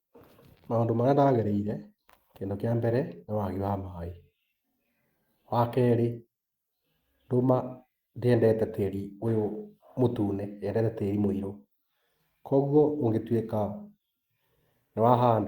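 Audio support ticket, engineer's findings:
Nothing stood out on listening to the speech in this clip.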